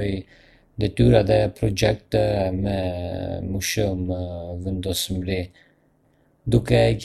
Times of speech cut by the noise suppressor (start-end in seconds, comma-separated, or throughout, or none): none